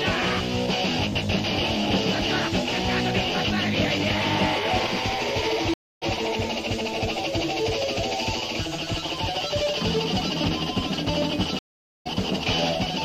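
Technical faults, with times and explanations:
5.74 to 6.04 s and 11.59 to 12.07 s, stream reconnect: the connection dropped and the player fell silent for about 0.28 s and then about 0.47 s while it reconnected. A fresh decoder picked up the stream in mid-flow, so the sound resumes further on, skipping roughly 150 ms the first time and roughly 300 ms the second. The opening frame after each gap fades in.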